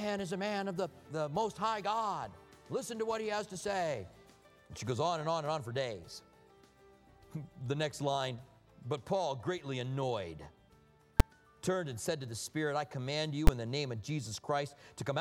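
Two sharp, very loud bangs cut through the audio, at 11.20 s and 13.47 s. They are invalid numbers at full scale: a calculation produced invalid values that were pinned to maximum level for short blocks, fitting 256-sample and 512-sample blocks.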